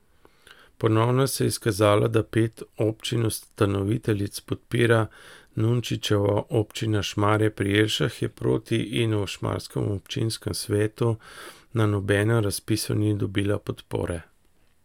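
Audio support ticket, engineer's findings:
No faults found on listening; no action required.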